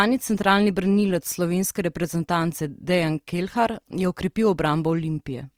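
Throughout the speech, Opus compression is likely at work: bands are filled with folded or noise-like energy, so tones sound rough and grainy, consistent with about 24 kbps. A spectrogram shows content reaching 20.4 kHz, with smeared, speckled upper bands instead of clean harmonics.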